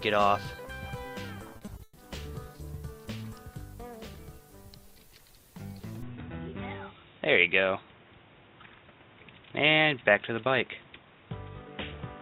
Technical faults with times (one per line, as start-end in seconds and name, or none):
1.53-1.99 repeated packet loss (robotic sound)
6.02-12.21 input switched to a poorer device